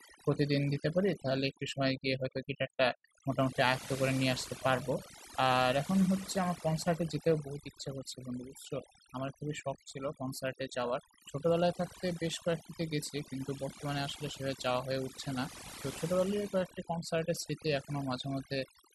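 Throughout the speech, overdone noise removal gates individual frequency bands near the noise floor, leaving near-silent gaps with twinkling specks; spectrograms show scattered isolated blobs.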